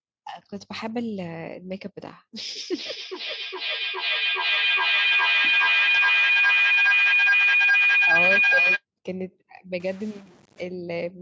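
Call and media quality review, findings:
Feedback howl, 2.63 to 8.84 s: tone near 3 kHz building to about 9 dB above speech, repeating roughly every 400 ms. Acoustic loop between two devices in one room; repeats grow rather than decay, unlike plain echo.

Stuck bit, 9.8 to 10.61 s: bit errors riding the waveform, with noise filling quiet gaps, unlike clipping, which stays silent in pauses. Likely a data bit held fixed by a faulty line or converter.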